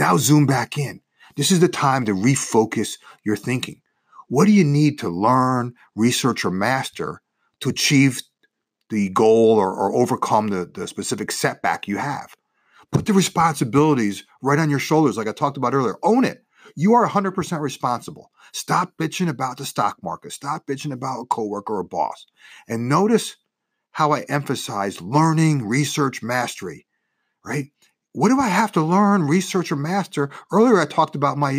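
Nothing in this speech recording stood out as a technical problem on listening.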